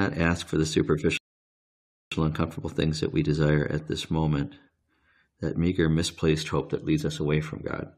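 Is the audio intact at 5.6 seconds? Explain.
Yes, the speech at 5.6 seconds is intact, with no dropout, click, distortion or other fault to be heard at that moment.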